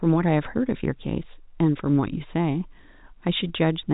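No technical faults are audible.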